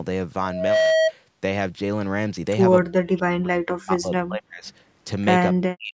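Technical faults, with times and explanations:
2.95–4.66 s, speech suppressed in double talk: The echo canceller was likely facing both sides talking at once. Unable to tell the near talker apart from loudspeaker echo, it turned everything down together. The speech sinks by as much as about 40 dB, with around one and a half seconds of this stretch held down while the other side was talking.
5.57–5.93 s, speech suppressed in double talk: The same overlap recurs at the end. The echo canceller likely again mistook the near talker for echo and attenuated the whole signal. The speech drops steeply, by up to about 40 dB, and roughly a third of a second of it is clipped away or buried. The clip closes on this muted tail instead of the full level.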